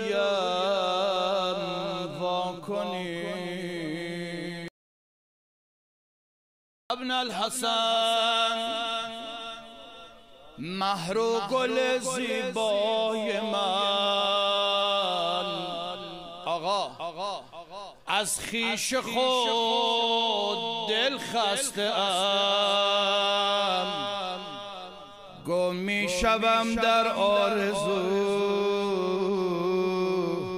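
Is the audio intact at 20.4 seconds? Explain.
Yes, at 20.4 seconds the audio is intact, with no dropout, click, distortion or other fault at that moment.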